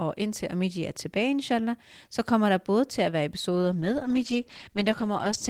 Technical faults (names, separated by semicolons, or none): call bitrate drop